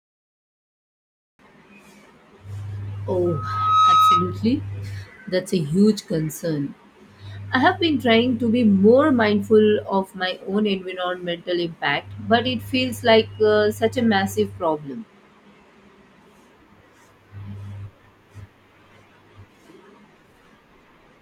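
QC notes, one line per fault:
3.25–4.42 s, loudspeaker feedback squeal: a pure tone at 1.3 kHz creeps in and swells over roughly half a second until it's sitting a few dB above the speech, then hangs there until it cuts off. That's the mic hearing its own loudspeaker. At 1.3 kHz the loop gain tops unity, so every trip around the loop makes that one frequency louder. The result is a single whistling pitch, not broadband noise.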